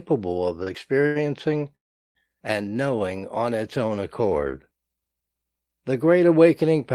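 Right at 0.63 to 0.69 s there's a short stall from a late packet: the jitter buffer ran dry, so the last bit of sound got stretched about 32 ms until the packet turned up. Nothing's lost, just a held, slightly buzzy moment. Same again at 1.07 to 1.17 s, this time 88 ms long. Then from 1.75 to 2.17 s comes a call audio freeze, with about 0.4 s inserted. A very brief held buzz drops to near-silence for about 380 ms, then the speech resumes right where it left off, so nothing is missing. The likely cause is packets getting held up in transit and emptying the buffer.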